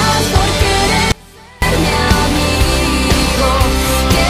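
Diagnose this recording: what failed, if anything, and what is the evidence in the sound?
Audio dropout to a faint residue, from 1.12 s to 1.62 s. For about half a second the sound cuts out abruptly, then returns just as abruptly. This is not a pause or a fade. During the gap, only a faint trace of the sound remains, roughly 25 dB below its normal level. That residue shows the path after the break stayed live. The likely cause is a momentary interruption in the analogue wiring feeding that live input.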